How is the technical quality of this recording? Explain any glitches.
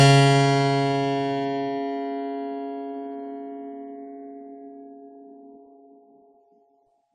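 The technical quality is limited by plainly audible compression damage across the whole music clip. AAC compression runs from start to finish: nothing is present above about 11.6 kHz, and the remaining spectrum sounds thinned and smeared, which fits AAC-LC at a low bitrate around 32 kbps as the likely cause. With so few bits, the encoder discards the top band and coarsely quantises what remains, leaving the music dull, veiled and lacking its upper detail.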